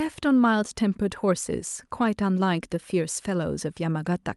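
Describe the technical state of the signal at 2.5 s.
At 2.5 s the speech is intact, with nothing wrong at that point beyond the ordinary character of the WebRTC call path it passed through.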